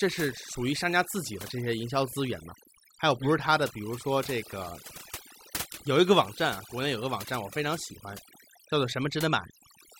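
Speech, with overdone noise removal throughout the recording. The noise reducer was set too hard. Bands near its noise estimate are pulled down or cut, taking quiet parts of the voice with them. Gaps drop and break up into twinkling specks.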